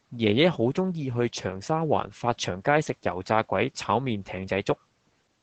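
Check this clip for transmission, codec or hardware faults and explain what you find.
The speech carries Opus voice compression from start to finish. Nothing is heard above about 8.6 kHz, which points to the SILK wideband mode at roughly 12 kbps. Its linear-prediction coder quantises the excitation coarsely. The damage is plainly audible: muffled, hoarse and faintly robotic.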